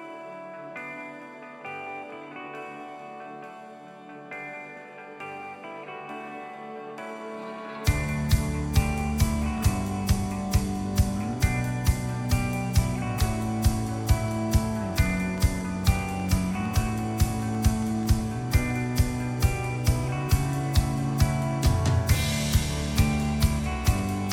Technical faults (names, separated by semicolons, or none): train of clicks